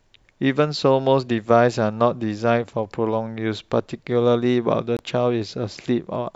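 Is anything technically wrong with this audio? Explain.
Yes. At 4.97 to 4.99 s the speech cuts out for about 23 ms: a short hole of silence, after which the sound picks up further along, as if it had kept playing through the gap. This is likely a Bluetooth dropout. Audio data failed to arrive at the headphones in time, so it was discarded and the output fell silent until usable data resumed. A gap this brief fits a single lost packet.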